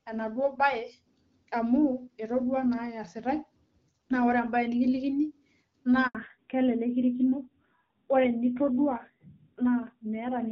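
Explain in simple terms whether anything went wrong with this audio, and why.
At 6.07 s the speech cuts out for about 80 ms, until 6.15 s. This is a handover gap: the phone switched networks and no sound arrived during the changeover.

From 6.15 s to the end the speech sounds duller and rougher, with nothing above 4 kHz. This is a fallback to narrowband: the call dropped from HD Voice to an older, lower-quality phone codec.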